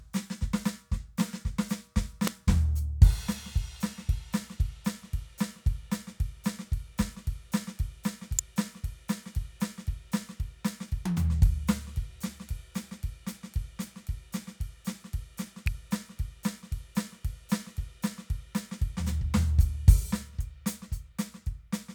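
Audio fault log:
2.27, 8.39 and 15.67 s, electrical switching spike: three sharp snaps land on top of the music, likely a nearby switch or motor arcing into the line. The first two are a few milliseconds long and the last is briefer still, and they get quieter in turn, from quite hot to fairly modest.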